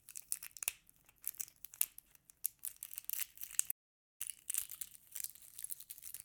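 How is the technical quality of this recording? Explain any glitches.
The technical quality is compromised by two linked glitches in the second half of the clip.

From 3.71 s to 4.21 s there is a playback stall: the player likely ran out of data or was blocked, so the sound cuts out for about half a second before resuming.

From 4.21 s to the end comes time-compressed catch-up: the player trims and cross-fades small slices to clear its backlog, so the sound runs about 1.15 times fast at unchanged pitch.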